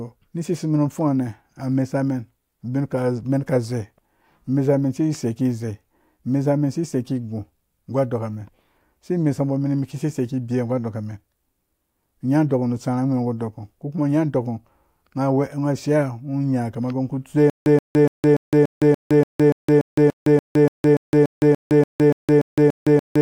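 From 17.5 s to the end, the speech breaks into a stutter with silent gaps: a 126 ms burst of the same sound repeats 20 times, each followed by 163 ms of dead digital silence, a steady 289 ms cycle. This is likely a stalled stream replaying its last buffered fragment at each retry. Unlike a seamless loop, the burst never runs straight into itself, and unlike random dropouts, both the replayed material and the spacing stay identical, so new audio never resumes.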